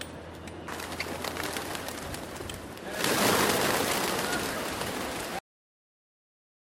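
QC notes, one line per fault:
5.39 s to end: cut-off end. The sound just stops mid-event at 5.39 s and drops straight to dead digital silence for the last 1.4 s or so, with no natural decay. The final buffers never got written out, so the tail simply isn't there.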